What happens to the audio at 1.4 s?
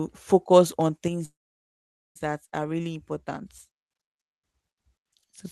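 At 1.4 s the sound has stalled: just after "focus on" it stops at 1.25 s, trails off into a brief fading buzz, and then stays near-silent for about 0.85 s. It resumes at 2.17 s right where it left off, so nothing is lost but everything arrives about 0.9 s late. This is a call audio freeze, likely caused by delayed packets draining the jitter buffer, with the receiver stretching the last sound until they arrived.

The moment also falls inside a sudden gain jump that begins at 1.08 s and lasts to the end. Sound and background drop together by about 6 dB in a single step, likely because a gain setting was applied instantly instead of being ramped.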